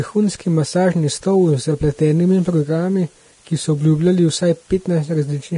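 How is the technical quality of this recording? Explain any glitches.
The recording is heavily degraded by lossy compression for its whole length. The fault is Vorbis compression, likely the cause of what is heard from start to finish: nothing remains above about 10.6 kHz, and the treble below that cut-off is coded so coarsely that its fine detail is replaced by noise of similar energy. The speech sounds hissy and grainy, with roughened tones and smeared consonant attacks, damage that fits a very low bitrate of around 31 kbps.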